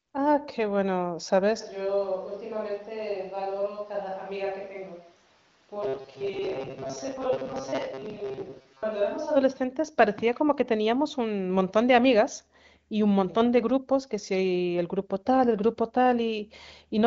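At 1.62 s the speech suddenly turns roomy and hollow, with thinner bass, a drop of about 10 dB, and background noise sitting only about 30 dB below the speech. This is a switch to a distant microphone, likely because the close mic dropped out and a farther one took over. Unlike a gentle reverb or EQ change, the shift is abrupt at both ends; the close sound snaps back at 9.35 s.

Within that stretch, from 5.83 s to 8.84 s, the speech becomes a rigid metallic buzz locked at 134 Hz while still loosely tracking the syllables. This is robotic sound from repeated short buffers: a segment of about 7.5 ms is likely replayed over and over, so roughly half of the audio is repetition, and the real audio under those repeats is skipped. What separates it from ordinary codec roughness is that fixed pitch. The AMR-WB wideband band limit, with nothing above 7.5 kHz, stays unchanged throughout.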